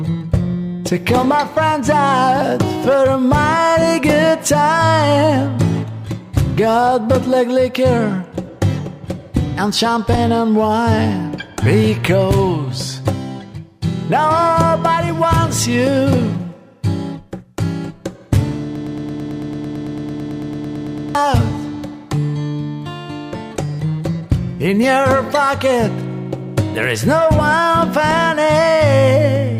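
At 18.76 s the audio locks into a broken-record loop: a fragment of about 111 ms repeats exactly, back to back, 22 times until 21.15 s, giving a rapid stutter that lasts roughly 2.4 s. The likely cause is a stall in the player, encoder or stream, which kept re-sending the last fragment it held. Whatever audio belonged in that 2.4 s span is lost rather than delayed.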